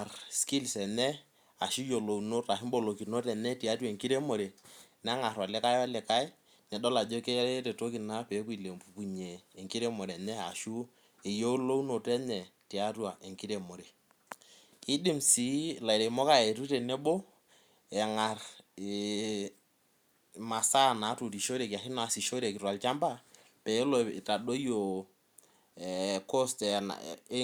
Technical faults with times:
none

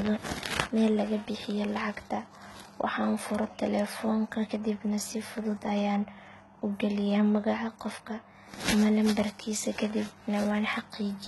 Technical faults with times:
0.00-11.27 HE-AAC compression

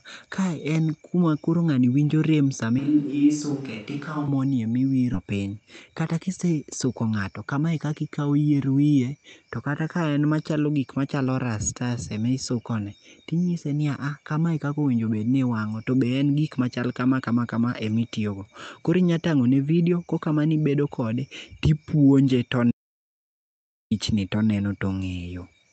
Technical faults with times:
2.79-4.28 switch to a distant microphone
5.13-5.15 skip ahead
5.22-6.60 jitter buffer speed-up
22.71-23.91 audio dropout to silence

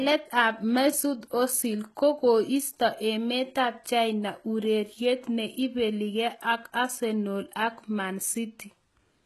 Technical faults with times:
0.00-9.26 HE-AAC compression

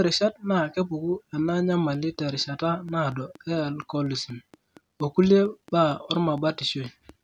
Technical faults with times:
1.49-7.10 train of clicks

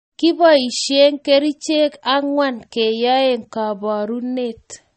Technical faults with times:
0.00-4.97 MP3 compression

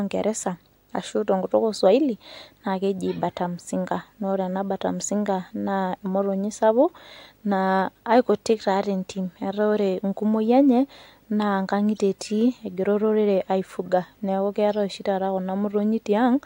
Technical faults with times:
0.00-16.46 video or display buzz

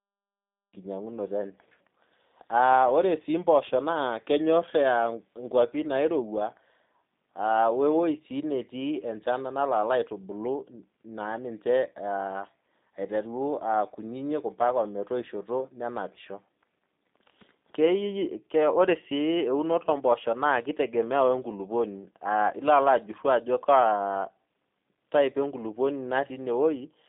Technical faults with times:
0.00-27.09 G.729 codec

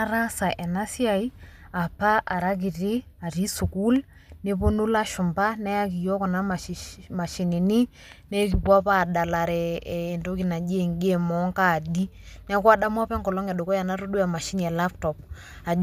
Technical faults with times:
none

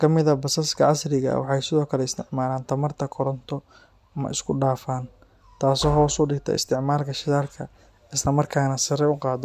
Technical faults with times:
none

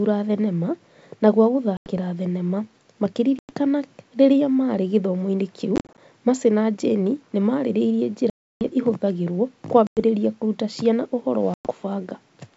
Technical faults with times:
1.77-1.91 packet loss on an ADPCM call
3.39-3.52 packet loss on an ADPCM call
5.76-5.99 packet loss on an ADPCM call
8.30-8.62 packet loss on an ADPCM call
9.87-9.99 packet loss on an ADPCM call
11.54-11.72 packet loss on an ADPCM call

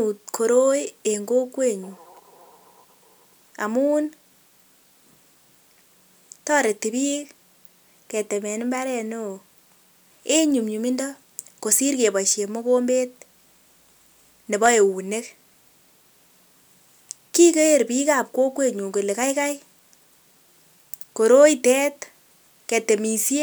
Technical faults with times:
14.66 dropped samples
19.23 dropped samples

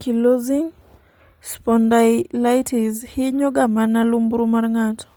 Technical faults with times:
0.00-5.17 Bluetooth LC3 compression

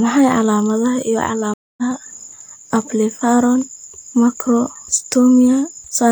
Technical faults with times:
1.54-1.83 stream reconnect

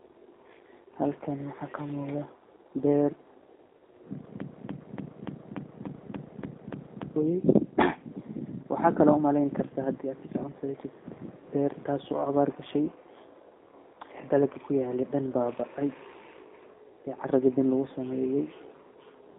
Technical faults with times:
0.00-19.38 G.729 codec
4.40-7.16 broken-record loop

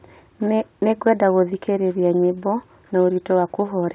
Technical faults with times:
none

